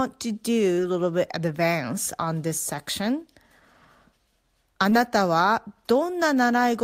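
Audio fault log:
4.89–4.93 s short concealed packet loss. About 20 ms of the speech arrived too late to decode. The receiver covered the gap by extending the preceding sound for 19 ms, then blended back into the real signal. That patch is heard as a brief smear or wobble.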